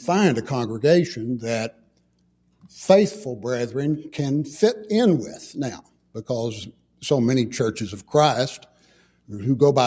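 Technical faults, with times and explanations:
1.72–2.01 s, 2.21–2.73 s, 5.82–6.15 s, 6.72–7.03 s and 8.64–9.30 s, sound cut by the noise suppressor: in each stretch the suppressor misread steady or decaying parts of the sound as noise and pulled them down, by about 12 dB at the deepest. The dips last from roughly a fifth of a second to half a second each. Unlike a dropout, the sound thins and sinks rather than vanishing, and sharp onsets still get through while tails are clipped short.
3.135 s, bit error spike: a single flipped bit sent three consecutive samples jumping by a power of two before snapping back. The result is one sharp, broadband tick unrelated to the surrounding sound, over in a fraction of a millisecond. A codec glitch or buffer dropout would disturb a longer span, whereas this is an isolated click with no gap or smearing around it. The call microphone processing, which carries nothing above 8 kHz, is normal and not a fault.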